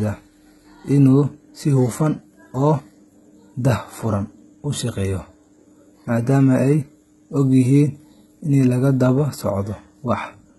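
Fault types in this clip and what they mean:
HE-AAC compression: speech treble sounds copied-up and synthetic, s sounds gritty and metallic, nothing above 11.8 kHz; likely band replication fitting 16 kbps, unlike plain low-pass dullness.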